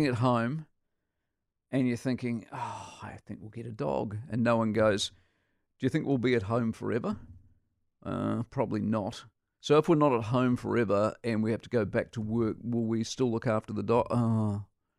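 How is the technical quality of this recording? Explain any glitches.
No technical faults can be heard anywhere in the recording, and the speech signal stays continuous and intact throughout.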